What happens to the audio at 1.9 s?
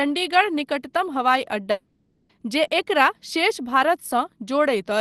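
A long network dropout runs from 1.71 to 2.31 s: the last sound is stretched into a fading buzz that thins toward a low, steady noise for about 0.58 s, then the audio resumes with that stretch missing, likely because packets stopped arriving.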